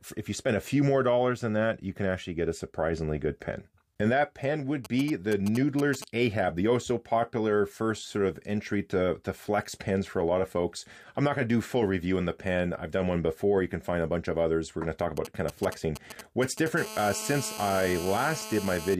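At 4.85 to 6.04 s and again at 15.17 to 16.68 s you get GSM signalling bursts: a 2G phone nearby is sending short groups of radio bursts, and the audio circuit rectifies them into a galloping dit-dit-dit of ticks and brief 217 Hz buzzes, roughly 10 dB below the programme.

Right after, from 16.77 to 18.95 s, it turns into full GSM phone buzz as the handset settles into a call. It now transmits steadily 217 times a second, so the rectified pulses give a continuous, hard, raspy 217 Hz buzz full of harmonics, about 12 dB under the signal.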